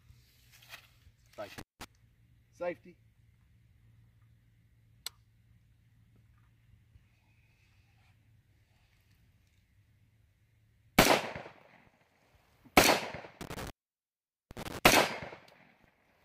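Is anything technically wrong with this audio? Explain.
Yes. At 1.58 to 1.84 s and again at 13.41 to 14.79 s the sound drops out, with crackle at each edge, for about 173 ms and then 812 ms. This is an intermittent contact: a loose plug or cable briefly opening the signal path.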